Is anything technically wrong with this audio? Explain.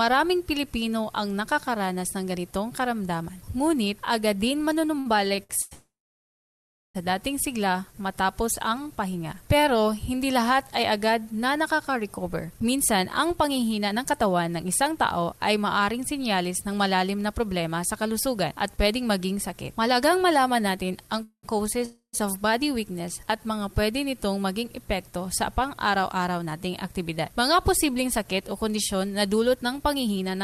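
Yes, there are several delivery faults.

From 4.99 to 5.73 s the sound drags and stutters through five short holds, the longest 98 ms. These repeated stalls (stutter) happen because late packets left the jitter buffer empty and the last sound was stretched to cover.

At 5.73 s the audio stops and stays silent for about a second before resuming at 6.97 s. Shorter halts follow at 21.23 to 21.45 s and 21.85 to 22.15 s. These are call audio freezes, likely from delayed packets draining the buffer and forcing a filled gap.

From 12.64 to 20.98 s the sound runs hurried at 107% speed with unchanged pitch. The same jitter buffer speed-up returns from 26.39 s to the end. The receiver trimmed tiny pitch-period slices, roughly 0.7 s and 0.3 s in total, to cut excess delay.

Between 23.24 and 24.18 s the sound is drawn out, at 92% speed. This jitter buffer slow-down repeated short periods, adding 83 ms to rebuild a reserve.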